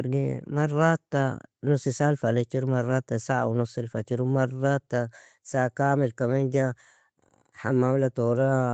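No technical faults can be heard in the speech; its content stops at about 8 kHz, as expected from call microphone processing and a wideband call codec such as Opus carrying it.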